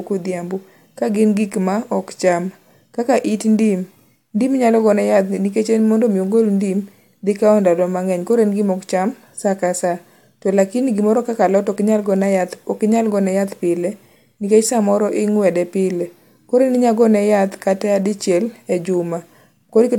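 No technical faults can be heard anywhere in the recording. Nothing in the signal calls for comment at any point along the timeline.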